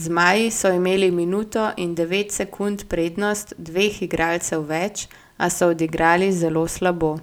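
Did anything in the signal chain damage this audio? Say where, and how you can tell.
No, nothing in the chain audibly damaged this speech recording. I can't place any point where a stage along the way left its mark on the sound.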